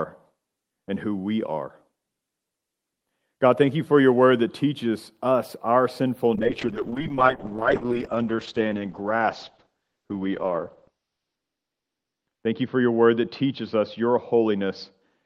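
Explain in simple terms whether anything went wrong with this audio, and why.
From about 6.37 s to the end, the speech turns rough and muffled, losing its crisp, bright edge, and stays at its worst for roughly the last five seconds. This is a call bitrate drop. The connection judged it had less room, so the encoder squeezed the voice into far less data, coding it more coarsely and cutting away the higher sounds. The quality never recovers before the clip ends.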